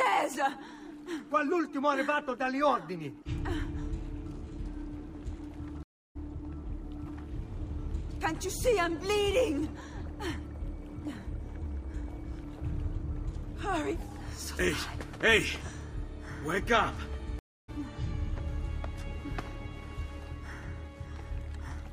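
Stream reconnects at 5.83 s and 17.39 s: the connection dropped, leaving silences of 321 ms and 292 ms. The player then restarted its decoder mid-stream, so each time the sound resumes roughly a third of a second later, easing back in over its first frames.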